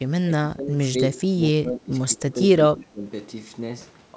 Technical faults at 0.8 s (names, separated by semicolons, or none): speech suppressed in double talk